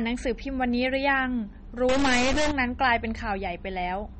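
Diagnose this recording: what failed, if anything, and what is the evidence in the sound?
The speech runs through a codec stage with plainly audible MP3 compression damage. Nothing survives above about 8.4 kHz, and the band below has a watery, swirling quality where weak components flicker in and out. On a spectrogram that shows as a hard horizontal ceiling at 8.4 kHz with speckled, holey patches beneath it. The encoder is running short of bits, which fits a low rate around 32 kbps.

From 1.89 to 2.51 s a distortion rides on the speech, and the quieter moments fill with noise instead of falling silent. This is a stuck bit, likely at the converter or in a sample-format path, with one data bit held at a fixed value. On the waveform, samples jump by a constant step wherever that bit should differ. The spectrogram shows broadband hash smeared across that window.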